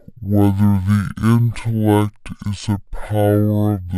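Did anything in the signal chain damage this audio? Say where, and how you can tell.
Yes. Stereo read as mono runs throughout the speech, from start to finish, and the damage sits at the sample-format or channel-layout stage where the file is decoded for playback. Interleaved left and right samples are being taken one after another as a single channel, so each stereo frame becomes two consecutive samples. That halves the speed (0.5x) and drops the pitch by 12 semitones, a full octave, and leaves a fainter mirror image of the sound in the upper half of the spectrum.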